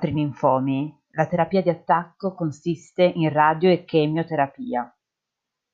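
A recording of speech, with no technical fault to be heard anywhere in it. Nothing stands out at any point, so there are no times or causes to give.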